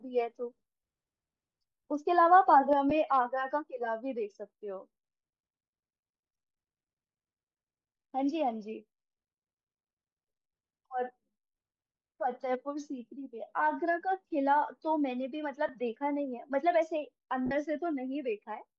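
From the start the speech has a breathy, grainy edge on sibilants and vowels, with the top octave sounding hissy rather than detailed. This is likely Bluetooth LC3 compression, and the damage is plainly audible. The codec has coded the upper spectrum sparsely and filled it with noise, a texture that fits a stream of around 48 kbps. On a spectrogram the high band looks speckled and uniform instead of following the harmonics.

At 2.73 s there is a sudden gain jump. The speech and the background noise drop together by about 6 dB and stay there to the end, probably from a setting applied without a ramp. The waveform envelope steps down in a single sample with no taper, and every band on the spectrogram darkens at the same instant.

Lost LE Audio frames follow at 2.90 s and 15.68 s, each a 10 ms gap that sounds like a brief rough flutter. The decoder repeated the previous spectrum with scrambled phase, which points to one missing frame each time. 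At 17.46 to 17.51 s a 50 ms loss smears into noise and fades audibly. A spectrogram shows blurred vertical patches there, with the harmonic lines broken and the last patch dimming.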